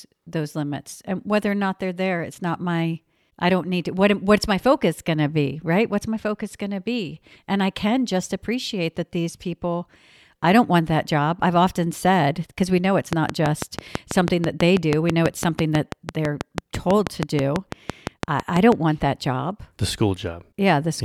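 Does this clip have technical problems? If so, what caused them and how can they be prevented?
Yes. A train of clicks runs from 13.13 to 18.73 s, after "because we know it's" and before "want that job": about forty regular ticks at 6.1 per second, peaking about 15 dB above the speech. The likely cause is interference from nearby equipment or a faulty connection or power supply injecting a repeated pulse. On a spectrogram they appear as evenly spaced thin vertical broadband lines, and on the waveform as matching sharp spikes. Keeping other electronics away from the recording chain and using a stable, properly powered interface would prevent it.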